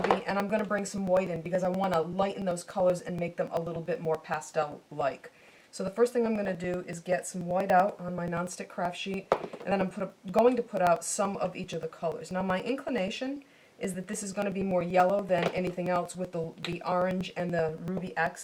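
From 0.11 s to 18.36 s there are periodic USB or driver dropouts. A tick repeats every 0.096 s, about ten times a second, for the whole span. Each time, something stalls the USB link or the audio driver. A few milliseconds of audio are lost. The gap is not filled with silence. The missing stretch is skipped, so the waveform jumps. That jump makes a small click. The clicks only sound while there is signal, and they form a steady, fast ticking.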